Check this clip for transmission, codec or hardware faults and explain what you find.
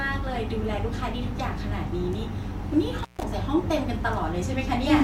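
There is one hardware fault in the speech: an intermittent contact between 2.98 and 3.23 s. A loose connection opens for about 146 ms, so the signal drops out with crackle at each edge and faint hiss underneath. The waveform shows a near-flat gap bracketed by spiky clicks; the spectrogram shows vertical broadband streaks around a quiet band.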